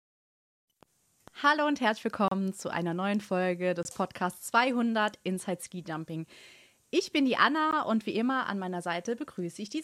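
Speech broken by three short silences at 2.28–2.32 s, 3.83–3.85 s and 7.71 s, lasting 33, 22 and 15 ms, each likely a Bluetooth stall where a starved receive buffer paused playback.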